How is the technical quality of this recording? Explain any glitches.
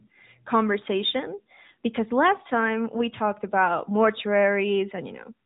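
The recording has passed through the AMR narrowband mobile codec for its whole length, and the damage is plainly audible. AMR-NB samples at 8 kHz and rebuilds speech from a vocal-tract model excited by a few pulses in each 5 ms subframe of a 20 ms frame. Here nothing passes above 3.8 kHz, so the speech sounds muffled and telephone-like. The buzzy, slightly synthetic texture fits a mid-rate mode of around 10 kbps.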